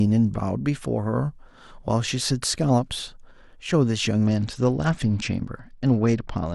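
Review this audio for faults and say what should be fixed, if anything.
Bluetooth SBC bit pool drop, from 4.24 s to the end of the speech at 6.54 s. The encoder cut its bit budget partway through. The top sub-bands are starved of bits and the remaining bands are quantised coarsely, so the treble goes dull and a gritty noise rides on the sound. The degradation fits a fall from a bit pool of about 31 to 10, near 77 kbps. Reducing radio congestion, or keeping the phone and headset closer, would let the link hold its normal bit pool.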